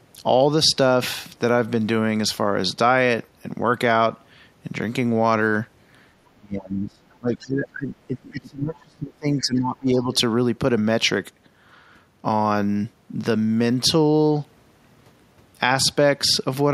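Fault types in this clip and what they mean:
Speech suppressed in double talk: With both ends talking at once, the echo canceller likely could not tell the near talker from the loudspeaker echo and pulled the level down on everything. Between 6.31 and 10.11 s the speech sinks, dropping by as much as about 30 dB at its deepest. Roughly three seconds of that stretch come through weakened or partly missing rather than at full strength.
Other side's voice leaking through: The far end's speech, played from the talker's loudspeaker, was likely not fully removed from the microphone signal by the echo canceller. A brief scrap of that second voice slips through from 7.44 to 7.48 s, inside the suppressed stretch. It sits well below the main speech, around 25 dB down, and is heard as a faint fragment rather than a sustained second voice.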